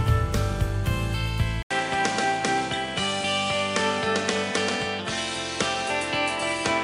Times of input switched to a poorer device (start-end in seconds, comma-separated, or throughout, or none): 1.63-6.83